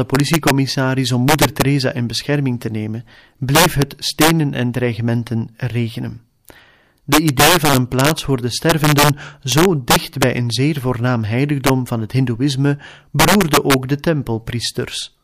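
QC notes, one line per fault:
throughout: integer overflow, about 5 dB overdrive wraps the loudest speech samples, a percent or two, to opposite sign: violent cracks, not clipping's flattened rasp.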